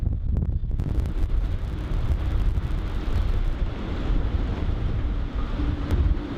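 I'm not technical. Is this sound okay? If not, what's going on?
No, there are two problems.

From 0.78 to 3.56 s there is a block size mismatch, with the end cut off. One part of the audio chain hands over chunks of sound, which fits 512-sample blocks, that are bigger than the next part takes in, so the tail of every chunk is thrown away. You hear this as a buzz at 100 times a second, and the sound runs about 1.07 times too fast while keeping its character.

From 5.91 to 5.94 s there is damaged data in a compressed stream. A small piece of the compressed file was corrupted, so the player could not read that stretch properly and lost its place until it found the next readable section. For that brief moment the sound is broken up instead of playing cleanly.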